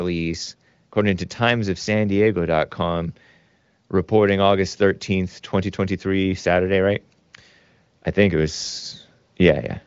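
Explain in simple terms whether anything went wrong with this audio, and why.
Nothing went wrong: the speech came through an AMR wideband (HD Voice) call path running at a rate high enough to keep it clear, and the lack of any sound above 7.5 kHz is simply that codec's normal bandwidth limit.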